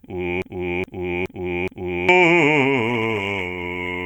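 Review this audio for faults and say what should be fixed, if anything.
Broken-record loop, 0.42 to 2.09 s: a 0.42 s slice of the music repeats exactly, back to back, four times, so the material that should have played there is lost. The likely cause is a stalled player, encoder or stream recycling the last fragment it held. A stall detector that resynchronises or outputs silence instead of replaying stale data would prevent this.

Call bitrate drop, 2.91 s to the end of the clip: the music turns coarse and muffled as its high frequencies disappear. That fits the bandwidth estimate collapsing and the encoder falling from around 64 kbps to about 17 kbps, where it stays for 1.15 s. Smoother bandwidth estimation with a higher minimum bitrate for music would prevent this.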